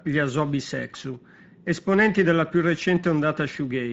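Throughout, the speech sounds noisy and hoarse, which fits Speex codec compression at a medium setting of roughly 17 kbps, too few bits for clean excitation.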